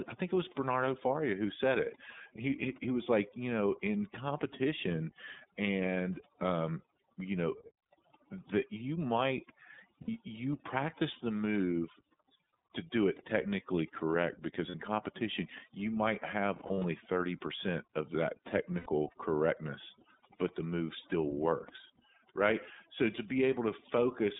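Speech sitting over an almost silent background dotted with twinkling specks is the result of overdone noise removal: the suppressor pulled individual frequency bands down whenever they came close to its noise estimate, and it took the quieter parts of the voice with them. The whole clip is also narrowband and slightly rough and synthetic, with nothing below 200 Hz or above 3.7 kHz. That is the iLBC codec at work, coding the excitation of each 20 ms frame independently in its 15.2 kbps mode, with plainly audible damage. Brief held, buzzy vowel-like smears interrupt the speech at 10.02 to 10.10 s (about 60 ms), at 14.70 to 14.76 s (40 ms) right after "it technically correct because", at 16.58 to 16.84 s as several short gaps spread over about 240 ms after "competition you might have", and at 18.78 to 18.87 s (80 ms) between "of that" and "correctness but the move". These are lost iLBC frames, where the decoder repeats the last pitch cycle mixed with noise. 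Because each frame is self-contained, the voice recovers almost immediately after each gap.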